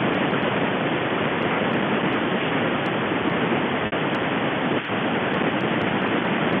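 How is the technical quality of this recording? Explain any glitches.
The recording is degraded by two faults: harsh distortion on loud moments throughout, and one brief dropout patched over with a repeated buzzy sound. The narrow telephone band, roughly 150 Hz to 3.4 kHz, comes from the G.711 line coding.

Across the whole 6.6 seconds of speech, the louder syllables carry a gritty, crackling edge that turns to fuzz on the strongest peaks. This is hard clipping. The signal was driven about 11 dB beyond what one stage in the chain could pass, so a small share of the samples, around one in twenty, had their tops cut flat. Those squared-off peaks add high harmonics that were never in the voice, and the ear hears them as that rasp.

From 3.86 to 3.92 s, the speech briefly freezes into a held, slightly buzzy tone before carrying on. This is packet loss with pitch repetition. About 60 ms of audio failed to arrive, which fits three 20 ms packets. 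To cover the gap, the receiver kept replaying the last pitch cycle it had and faded it down. Because that single cycle repeats unchanged, the result is the monotone buzz instead of the natural movement of speech.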